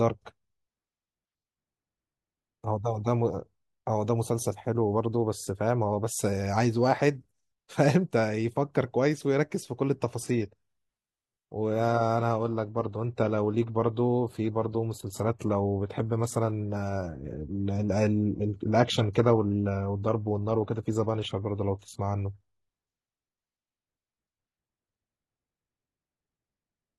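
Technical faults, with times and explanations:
10.23 to 22.23 s, adaptive stream at a lower bitrate: a sudden switch with no gap to thin, synthetic treble and back, fitting a drop from 96 kbit/s AAC to 16 kbit/s HE-AAC.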